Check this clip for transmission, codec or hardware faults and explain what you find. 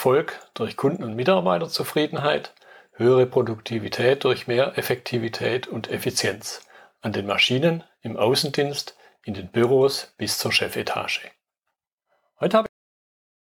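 Two kinds of fault are audible: bit error spikes and a cut-off end.

Bit error spikes occur at 8.49 s and 9.64 s. A flipped bit throws one to three samples far off and back. Each gives a single sharp, broadband tick.

A cut-off end occurs at 12.66 s. The final buffers never reached the output, so the sound stops mid-event. It drops straight to digital silence with no decay.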